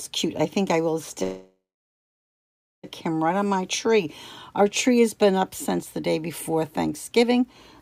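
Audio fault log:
1.23–2.85 s call audio freeze: a brief fading buzz or hiss, then a 1.24 s flat, blank stretch on waveform and spectrogram, likely an emptied jitter buffer; playback resumes intact, 1.6 s late.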